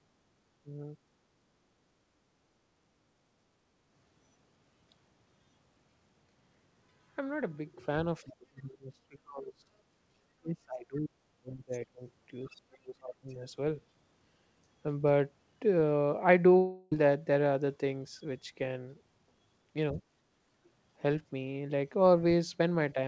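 The echo canceller was likely confused by both sides talking at once, producing speech suppressed in double talk: the speech dips by about 5 dB from 0.64 to 0.94 s, then sinks much deeper from 8.24 to 9.71 s (about 25 dB) and from 10.4 to 12.02 s (about 40 dB).

At 12.46 to 12.55 s, residual echo the canceller likely failed to remove lets the other side's voice leak through as a faint scrap, about 35 dB below the speech. Overlapping it, double-talk suppression likely pulls the speech down by about 30 dB from 12.47 to 13.4 s, and a second faint leak, about 40 dB down, slips through at 13.29 to 13.34 s.

A long network dropout, likely from packets failing to arrive, removes about 0.34 s from 16.58 to 16.92 s. The receiver fills that gap with a fading buzz-like continuation, and the speech then resumes with the missing portion gone.

At 19.93 s, a brief 70 ms dip of about 5 dB is likely the echo canceller again suppressing speech in double talk. 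Throughout the clip, the G.722 call path leaves nothing above 8 kHz.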